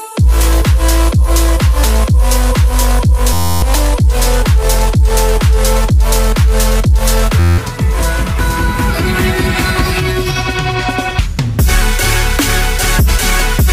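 A system hang loop occurs twice, from 3.33 to 3.62 s and from 7.40 to 7.58 s. Each time the audio collapses into a steady buzz at about 86 Hz, because one 11.61 ms fragment repeats exactly. That fits a 512-sample buffer that the sound hardware kept replaying while the computer or driver stalled. When output resumes, around 0.3 s and 0.2 s of audio respectively are missing.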